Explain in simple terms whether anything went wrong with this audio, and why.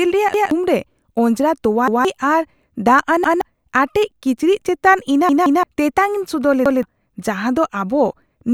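Something did go wrong here, a repeated buffer fault. Fresh audio arrived late, so the player replayed its last chunk of about 0.17 s (which fits an 8192-sample buffer). That causes stutters at 0.34, 1.88 and 3.24 s. At 5.29 s the chunk repeats twice, just before "ᱛᱮᱛᱟᱝᱼᱤᱧ ᱥᱚᱫᱚᱨ", and it stutters again at 6.66 s, right after those words.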